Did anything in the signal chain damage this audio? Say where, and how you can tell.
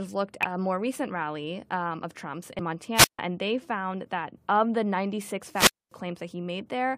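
Yes. At 0.43 s, just before "a more recent rally", and again at 2.59 s, damaged data in the compressed stream gives a brief glitch. The decoder loses frame sync and hunts for the next header.

Wireless microphone squelch dropouts occur from 2.95 to 3.19 s, before "and they found that", and from 5.51 to 5.93 s. Hiss rises, then the receiver mutes for 147 ms and 244 ms. That static before each hole points to a fading analogue radio link rather than digital packet loss.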